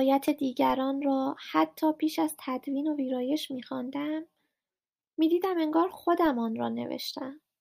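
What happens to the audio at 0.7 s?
At 0.7 s there is a DC step. The waveform's zero line suddenly shifts by about -34 dBFS, and a 20 Hz high-pass then drains the offset away. The jump is a low thump or click while the speech carries on unchanged. Unlike an ordinary click or dropout, nothing is missing or spiked in the speech itself. The disturbance is a displaced baseline that then settles back.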